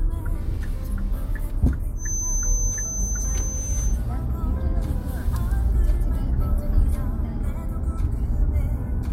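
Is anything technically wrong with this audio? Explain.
Yes. From 1.94 to 4.00 s a thin, steady 6.2 kHz feedback whistle sits about 10 dB below the sound, slowly swelling and fading, likely from a loudspeaker-to-microphone loop hovering at the edge of feedback.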